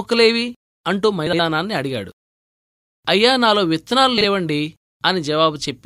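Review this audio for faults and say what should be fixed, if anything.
Frames out of order shows up twice in this speech clip. At 1.27–1.40 s two 64 ms blocks swap places, and at 4.18–4.24 s two 32 ms blocks do, so each stretch plays with its halves exchanged, with a garbled flutter, but no lost time. Reorder packets by sequence number in the jitter buffer before decoding to prevent it.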